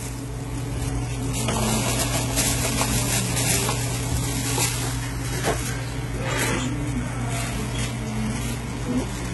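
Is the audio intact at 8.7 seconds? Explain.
No. At 8.7 s, as throughout, the treble sounds gritty and metallic, likely from heavy HE-AAC compression at a very low bitrate, around 16 kbps. Copied-up bands replace the real highs. A spectrogram shows repeated blocky treble patterns ending at a hard ceiling near 11.8 kHz.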